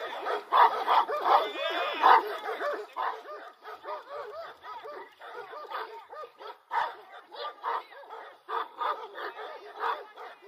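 From 2.74 to 3.12 s, zipper noise rides on the sound. The level drops by about 10 dB in unsmoothed 1 dB steps, roughly thirty per second, each ticking audibly.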